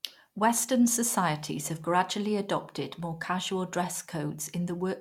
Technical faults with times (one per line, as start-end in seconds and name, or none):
none